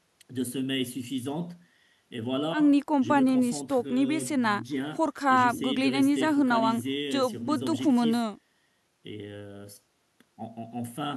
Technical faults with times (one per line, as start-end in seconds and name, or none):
none